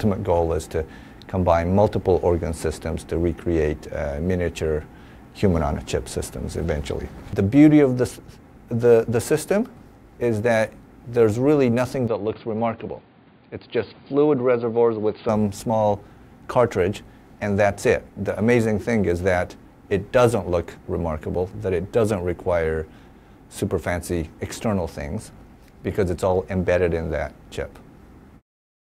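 From 12.08 to 15.29 s the input likely switched to a poorer device, with no gap at the switch. The band narrows to nothing above 4.8 kHz, the sound drops a few decibels and turns dull and boxy, and a faint new noise floor appears.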